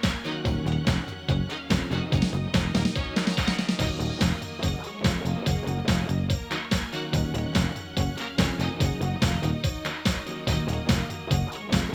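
Nothing in the audio stood out as a technical fault on listening.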